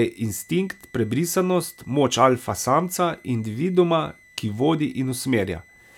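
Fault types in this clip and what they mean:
Switching supply whistle: a power supply's switching noise leaks into the speech as a thin whistle near 2 kHz, wandering between about 1.97 and 2.06 kHz, roughly 30 dB down, throughout.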